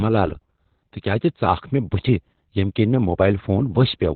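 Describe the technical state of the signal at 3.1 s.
At 3.1 s the speech sounds muffled, hoarse and faintly robotic, with nothing above about 4.4 kHz. That holds across the whole clip, so this moment is no exception. The cause is heavy Opus voice compression: the SILK linear-prediction coder is working in narrowband, modelling the voice with a crude, coarsely quantised excitation. The damage fits a very low bitrate, around 8 kbps, coded in 20 ms frames.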